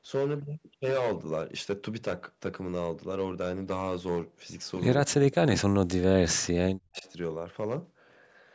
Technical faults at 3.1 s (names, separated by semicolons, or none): hard clipping